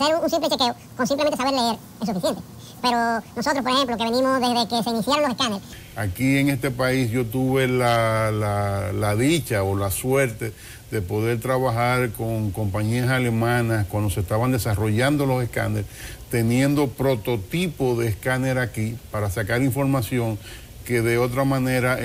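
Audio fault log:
0.00–5.73 s, audio read two samples at a time (double speed): for this stretch the reader's grabbing sample pairs as single frames, as if the stream had two channels or samples twice as wide, so it plays back at 2x speed and a full 12 semitones up, an octave high. Any strong content above a quarter of the sample rate has nowhere to go at that rate and folds back down.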